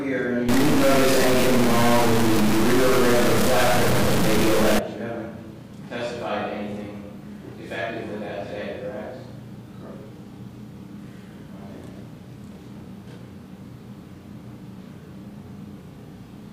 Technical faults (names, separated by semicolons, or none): stuck bit